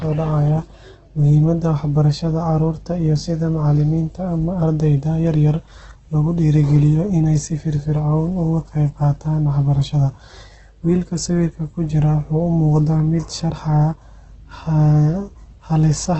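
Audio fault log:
throughout: Opus compression. Speech is band-limited, with nothing above 8.2 kHz, and sounds heavily grainy and rough, with a noisy texture in place of clean harmonics. This is likely Opus in its CELT mode filling starved bands with noise, which fits a bitrate near 12 kbps.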